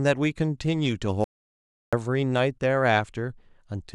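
Speech, with an audio dropout to silence from 1.24 s to 1.93 s. The signal stops mid-flow and leaves silence, with no room tone. About 0.68 s of speech is lost. The likely cause is a lost input while recording continued.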